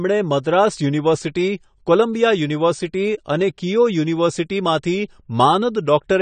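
Throughout, the speech sounds dull and smeared, with nothing above 9 kHz and a warbling, fizzy texture on sibilants, likely AAC compression at a low bitrate such as 32 kbps, unlike a plain low-pass filter.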